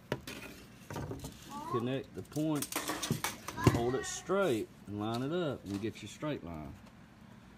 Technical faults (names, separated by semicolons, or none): none